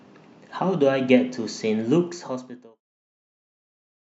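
No technical faults can be heard in this speech recording.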